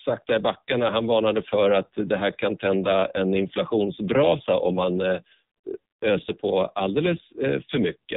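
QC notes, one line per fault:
Throughout, AMR narrowband mobile codec: the speech is band-limited to the 8 kHz sampled telephone band, so nothing above 4 kHz survives and sibilants lose their edge. The damage is heavy, with a buzzy, synthetic quality, because the vocal tract is rebuilt from a filter model fed by sparse pulses in each 5 ms subframe of 20 ms frames. The degree of coarseness points to one of the low AMR-NB modes, around 5.9 kbps.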